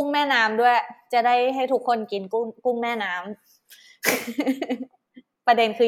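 No technical fault can be heard anywhere in this speech recording. No moment in it stands out as needing comment.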